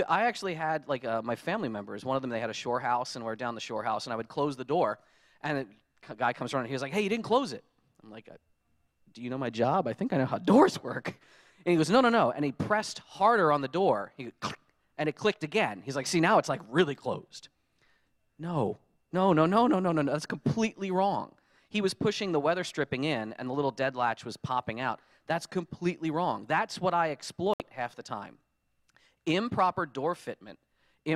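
Right near the end, at about 27.54 s, there's a digital broadcast dropout: the sound mutes abruptly and comes back at 27.60 s. The receiver evidently lost a couple of frames, either from a signal fade or failed checksums, and muted rather than play corrupted data. The hole runs roughly 64 ms, which fits two lost frames of about 32 ms each. Whatever was broadcast in that gap is simply gone, so you hear a brief clean cut.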